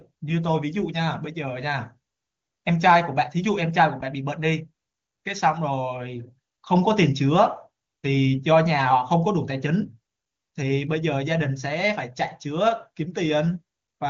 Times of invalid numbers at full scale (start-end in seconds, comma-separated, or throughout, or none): none